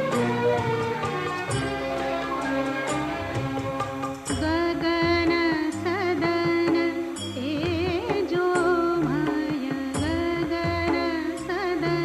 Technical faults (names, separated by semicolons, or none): timecode bleed